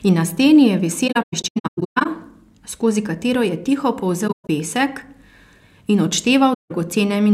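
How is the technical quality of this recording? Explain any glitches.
The speech has three dropouts from AAC frame loss with muting. From 1.07 to 2.06 s, then 4.27 to 4.49 s, and 6.53 to 6.72 s, missing frames were decoded as silence. Overlapping windows fade each gap in and out, leaving soft-edged holes. The longest gaps in the first two stretches run roughly 150 ms.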